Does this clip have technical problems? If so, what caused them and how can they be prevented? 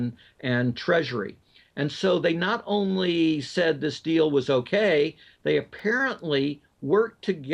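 Yes: a repeated buffer at 5.79 s, where a 1.33 ms piece, fitting a 64-sample buffer, plays four extra times with hard joins. It is heard as a click or brief buzz and shows as an identical repeating waveform segment and a thin vertical stripe on a spectrogram. Larger buffers or a higher-priority audio thread would prevent it.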